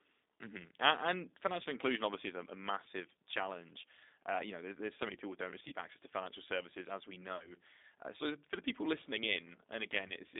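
G.729 codec compression runs throughout the speech. The codec models each 10 ms frame with a vocal tract filter, a pitch predictor and a few pulses at 8 kbit/s, so the voice sounds plainly rough and synthetic within a band of about 250 Hz to 3.7 kHz.

VoIP packet loss concealed by the speech codec occurs at 5.68 to 5.74 s, 7.36 to 7.51 s and 10.08 to 10.13 s. About 40 ms of packets were lost at each of the first two points and 20 ms at the third. The decoder filled each gap by stretching its last pitch and filter into a fading buzzy or noisy tone. Because every frame builds on the one before, the distortion lingers after packets resume, so the second dropout stays audible to about 7.51 s.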